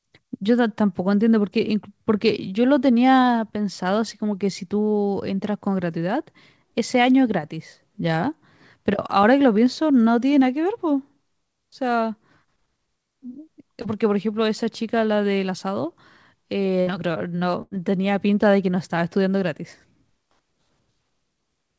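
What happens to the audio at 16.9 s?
A burst of packet loss cuts through the speech from 16.81 to 16.90 s. Several packets in a row never arrived in time, so the receiver stretched the last sound it had for about 59 ms, fading it down, and when the stream resumed, about 60 ms of speech had been skipped. It sounds like a brief held buzz or hiss followed by a small jump. On a waveform the envelope tapers, then restarts abruptly. On a spectrogram, smeared, repeated harmonics (still capped at 8 kHz by the G.722 call path) end in a hard edge.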